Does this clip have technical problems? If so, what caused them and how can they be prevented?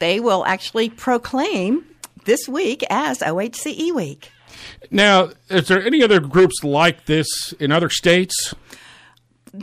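Yes. Hard clipping occurs from 4.98 to 5.20 s and 5.57 to 7.14 s (about 7 dB overdriven) and from 7.71 to 8.16 s (about 4 dB). The speech exceeded what the stage could pass, so the waveform's peaks are cut flat, and the spectrogram shows added harmonic energy far up the spectrum. Lowering input gain to leave headroom prevents it.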